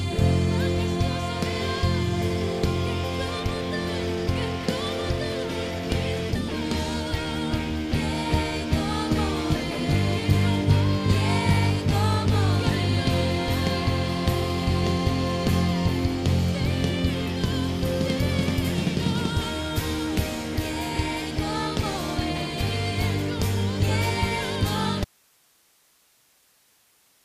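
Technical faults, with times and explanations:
25.05 s to end: audio dropout to a faint residue. The sound cuts abruptly to hiss roughly 35 dB down, likely from a signal lost while the downstream path stayed live.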